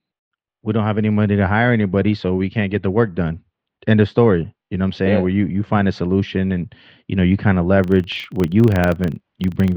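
From 7.8 s, after "know you kind of", a filter restarted on every block adds a 25 Hz buzz. Unlike steady mains hum, it tracks the speech level and disappears in pauses.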